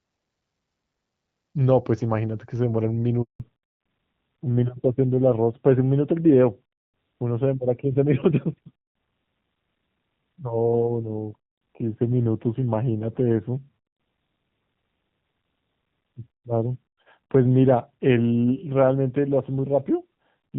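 At 3.22 s the speech cuts out in a handover gap lasting 180 ms, until 3.40 s. While the call was being moved between networks, no speech frames reached the receiver. The voice decays to silence within a few tens of milliseconds and stays silent until the new link delivers audio. Whatever was said during that gap is lost and cannot be recovered from the recording.

From 3.40 s to the end of the clip there is a fallback to narrowband. Before the gap, the audio has the fuller bandwidth and clarity of AMR wideband (HD Voice), with light coding damage, which fits AMR-WB at about 12.65 kbit/s. After the switch, nothing is present above 4 kHz. The speech sounds duller and rougher, consistent with the lower-rate AMR narrowband codec at around 7.4 kbit/s.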